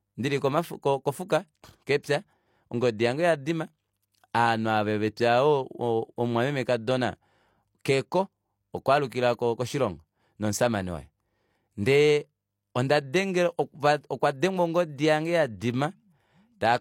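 A speech clip with one technical fault: pre-echo at about 2.03 s. A brief hiss arrives just before a sharp attack, spreading about 11 ms ahead of it. The attack itself sounds softened and smeared. This comes from a transform codec. The codec spreads quantisation noise across a whole block. Here the attack sits late in its block. Noise sized for the loud onset therefore leaks into the quiet moment before it.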